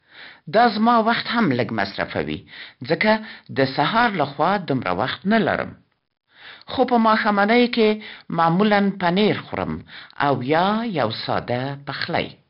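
4-bit ADPCM compression runs throughout this speech clip: gritty hiss tracks every loud passage, attacks distort, and nothing survives above 5.3 kHz, which fits a heavily compressed stream around 44 kbps. A drift correction step jumps speed and pitch up about a semitone (6 percent) from 1.39 to 1.96 s after "دا زما وخت", then down about a semitone from 5.11 to 5.83 s after "د سهار لخوا دومره", likely from clock-matching software abruptly changing the playback rate.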